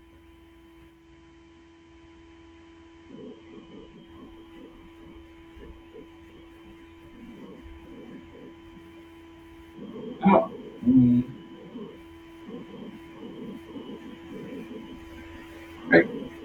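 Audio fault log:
0.87–4.13 s, digital radio blending to analogue. The receiver lost its digital stream and cross-faded over about 240 ms to the FM broadcast of the same station, then faded back at 4.13 s. Faint hiss rises, roughly 45 dB under the speech, from the noisier analogue path. The level also drops by about 1 dB because the two feeds are not matched.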